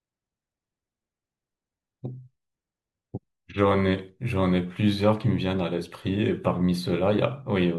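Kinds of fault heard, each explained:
No technical faults are audible.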